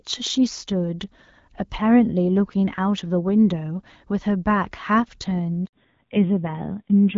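A handover gap at 5.65 to 5.73 s silences the speech for 80 ms while the call switches networks and no speech frames arrive. Fallback to narrowband follows at 5.73 s. The clear HD Voice sound gives way to a duller, rougher voice with nothing above 4 kHz, which fits a drop to narrowband AMR around 5.9 kbit/s.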